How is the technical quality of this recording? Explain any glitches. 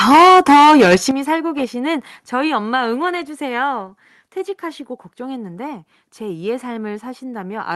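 The opening second has audible distortion, and the level then drops twice. The sound stops around 12 kHz, as expected from the call codec path it passed through.

From 0.1 to 0.96 s there is microphone overload. The likely cause is an input volume set too high. Peaks run about 9 dB past what the converter can represent, so their tops are sliced flat. Nearly a third of the samples in that stretch are clipped. The result is a harsh, crackly edge on the loudest parts.

The microphone volume is stepped down twice. The first step comes at 0.11 s and lowers the level by about 2 dB. The second comes at 1.11 s and takes off about 10 dB more. Each is a single abrupt jump, with no gradual fade. The sound and the background noise fall together. This fits call software reacting to the clipping by turning the device's input gain down.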